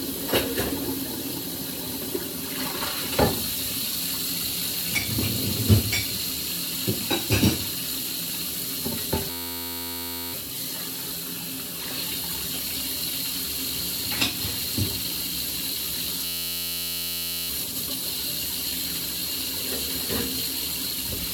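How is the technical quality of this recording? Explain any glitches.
The recording has two system hang loop glitches. From 9.3 to 10.33 s and 16.25 to 17.50 s, a frozen driver left the hardware replaying one 11.61 ms buffer (which fits 512 samples), producing a steady 86.1 Hz buzz. On a waveform this shows as identical repeating cycles, and on a spectrogram as evenly spaced harmonic stripes.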